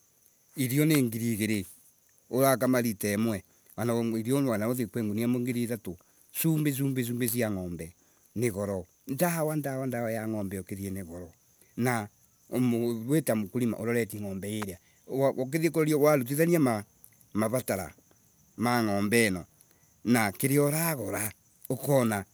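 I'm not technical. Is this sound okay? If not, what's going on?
No. There is an electrical switching spike at 0.95, 7.28 and 14.62 seconds: each one a sharp, very brief snap laid over the speech, gone almost instantly. The likely cause is something electrical nearby, such as a switch flipping, a motor starting or a small static discharge, making a tiny spark that the audio cable or equipment picked up as a click. The recording itself wasn't damaged; the snaps were added on top.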